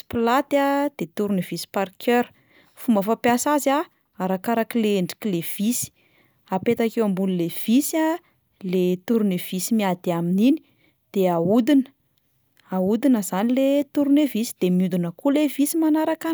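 No technical faults can be heard in this speech recording.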